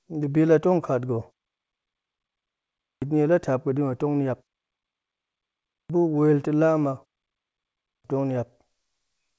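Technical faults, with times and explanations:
2.90 s, 5.79 s and 7.92 s, clipped start after a pause: each time the sound resumes after a silence (of 1.66 s, 1.44 s and 0.95 s), the first 119 ms, 106 ms and 123 ms are missing, so the onsets begin abruptly with their opening sounds cut away. The output device drops into an idle state during the gap and takes roughly a tenth of a second to wake or relock, discarding the audio that arrives meanwhile.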